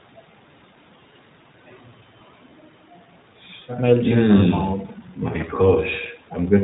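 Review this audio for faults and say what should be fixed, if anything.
The speech sounds rough and slightly synthetic for the whole clip, with a muffled, telephone-like top end and nothing audible above 4 kHz. This is plainly audible iLBC codec damage: the codec rebuilds each short frame's excitation on its own, here in a way that fits 20 ms frames at its 15.2 kbps mode, so fine detail and smoothness between frames are lost. The call microphone processing's trimming of the deepest bass is expected and isn't part of the fault. To prevent it, capture or transmit with a wideband codec such as Opus at a comfortable bitrate instead of iLBC.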